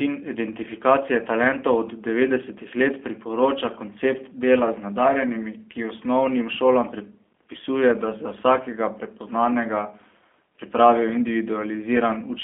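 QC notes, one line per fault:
throughout, G.729 codec: speech was carried by a low-rate voice codec whose sound fits G.729 at 8 kbit/s, rebuilding each frame from a vocal tract model and sparse pulses, so the speech comes out plainly rough and synthetic, confined to 250 Hz to 3.4 kHz.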